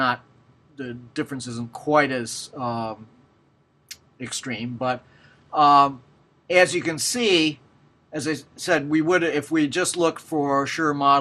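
Throughout, the sound is dull and gurgling, with upper sub-bands flickering in and out, which points to MP2 compression at a low rate such as 80 kbps, likely starving bands of bits.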